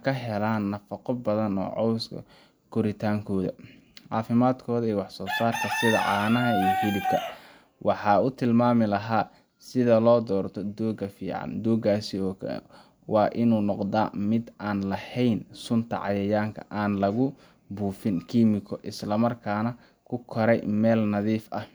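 Speech recording with no technical faults detected anywhere in the take.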